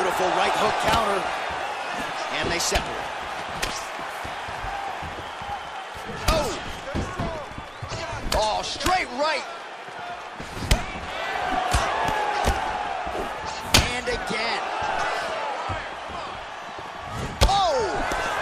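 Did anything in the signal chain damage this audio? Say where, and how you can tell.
No, none of the stages from capture through playback has left any audible damage on this audio.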